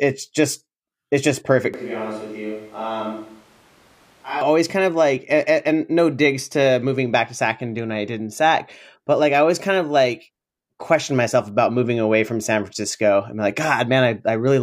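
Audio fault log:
1.74–4.41 s, switch to a distant microphone: right after "just it's just perfect" the speech abruptly turns roomy and hollow, thinner in the low end and about 10 dB quieter, with audible background noise sitting roughly 25 dB under the speech. It snaps back just before "kind of like and". The likely cause is that the close microphone's feed dropped out and a farther pickup carried the audio, capturing more room reflection and ambience relative to direct sound.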